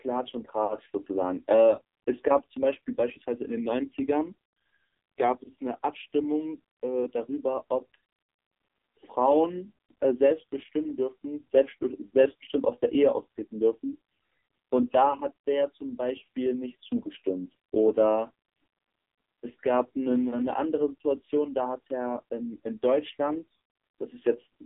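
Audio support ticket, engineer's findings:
AMR narrowband mobile codec, whole clip: buzzy, synthetic speech; spectrogram empty above 3.6 kHz and below 250 Hz; heavy damage fits a low mode near 5.9 kbps.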